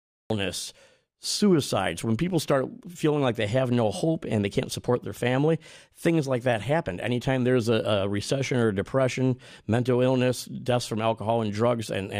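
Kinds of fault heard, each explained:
Cut-off start: capture of this speech began late, so the clip opens on digital silence until 0.30 s, where the sound enters abruptly mid-utterance. The first sound has no natural attack or onset, just a hard edge where the recording began.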